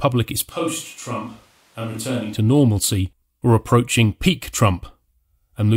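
Switch to a distant microphone, from 0.51 s to 2.34 s: the speech abruptly turns roomy and hollow, losing its low end and dropping by roughly 10 dB, while background room noise rises to about 30 dB below the speech. This is likely because the close microphone's signal dropped out and a far-off pickup, such as a camera microphone, took over. The close, full sound returns just as suddenly before "to normalcy or approaching".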